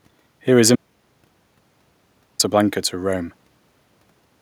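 An audio dropout to silence runs from 0.76 s to 2.39 s, cutting the speech off mid-flow for about 1.64 s. The gap is silent with no room tone, most likely because the input was lost while the recorder kept writing silence.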